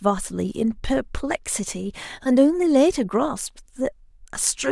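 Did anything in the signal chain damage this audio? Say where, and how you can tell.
No, nothing along the chain from capture to playback has left an audible mark on this speech. Listening closely, no stage of the path gives itself away in the sound.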